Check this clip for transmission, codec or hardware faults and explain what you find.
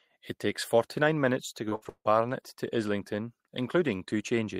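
One transmission fault stands out: repeated packet loss (robotic sound) from 1.69 to 2.07 s, just after "minutes to". Four dropouts, the longest 159 ms, were patched by extending prior sound, so about 68% of this span is synthetic, giving choppy, metallic speech. Spectrograms show smeared, repeated frames; waveforms show abrupt, looped segments.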